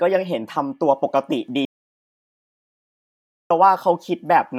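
At 1.65 s the speech cuts off into dead silence, no room tone, until 3.50 s: an audio dropout to silence, likely from a lost input feeding zeros.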